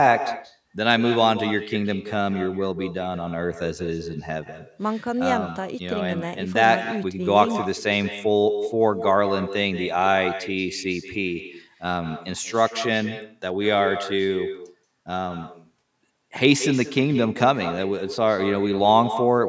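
Throughout the speech, an echo with no canceller shadows every phrase. The far end's loudspeaker feeds its microphone, and nothing removes the returning sound. A thinner copy arrives about a fifth of a second later, about 10 dB quieter, within the call's 8 kHz band.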